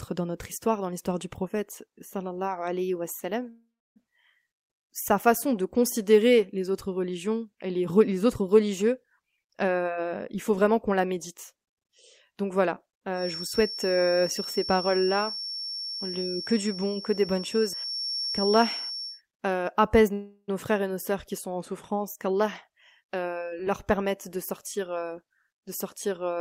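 At 3.49 s there's a call audio freeze, likely late packets draining the jitter buffer. The last sound is stretched into a fading buzz, with about 0.3 s of silence, and the speech resumes intact after a roughly 0.46 s gap. From 9.18 to 11.60 s a jitter buffer speed-up trims pitch periods to shed backlog, about half a second in all. The speech runs at 119% and sounds hurried, with the pitch unchanged. From 13.11 to 19.22 s a thin feedback whistle at 5.5 kHz wavers about 10 dB under the speech, likely from a speaker-to-mic loop sitting right at the edge of feedback. Another likely freeze at 20.13 s fills about 0.35 s, including a short silence of 60 ms. From 22.18 to 25.38 s a second speed-up runs at 111%, dropping about 0.4 s.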